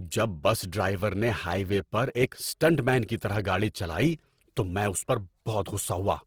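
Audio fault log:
throughout: Opus compression, likely running near 16 kbps in music mode, fills starved bands with folded spectrum and noise, leaving the speech plainly rough and grainy.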